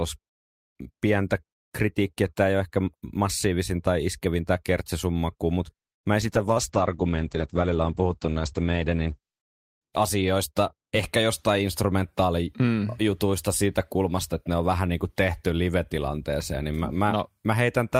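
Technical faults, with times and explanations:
6.22–9.49 s, call bitrate drop: right after "tämä kertsesummakku mutta mä" the encoder falls from 48 to 10 kbps and stays at the low rate for about 3.2 s, until "asioista ehkä jostain instrumentaalijutuista". With so few bits the speech is coded coarsely and sounds rough and watery, and the audio band shrinks from 20 kHz to 8 kHz, so it turns muffled. On a spectrogram everything above 8 kHz goes blank across that span.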